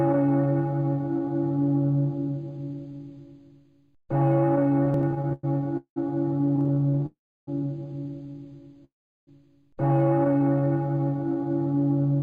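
From 4.85 to 5.98 s, packets arrived late and the jitter buffer kept running dry, causing repeated stalls (stutter). Eleven gaps were filled with continued sound, 405 ms in all, the longest 189 ms, so the audio drags. A lighter burst from 6.56 to 7.04 s has ten gaps of at most 15 ms.

A call audio freeze follows at 7.06 to 7.49 s, likely from packets held up in transit emptying the buffer. The last sound carries on briefly, then falls silent for 0.32 s before resuming where it stopped. Another freeze at 8.85 to 9.29 s holds silence for 0.37 s.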